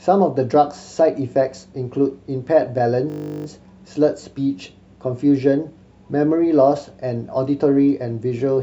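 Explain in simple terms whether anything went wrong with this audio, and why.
The computer briefly froze from 3.1 to 3.46 s while the sound hardware kept replaying its last 20 ms of speech, a system hang loop. That tiny piece repeats about 18 times, fifty times a second, so the speech turns into a steady buzz before resuming.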